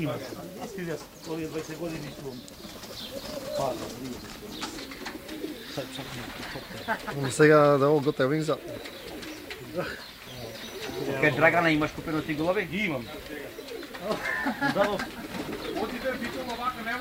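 Nothing in the audio stands out as a technical fault; it just runs along without any glitches worth pointing out.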